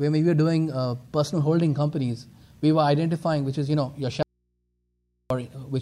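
From 4.23 to 5.30 s the sound cuts abruptly to faint hum, far below normal level: an audio dropout to a faint residue, likely the signal lost while the input stayed live.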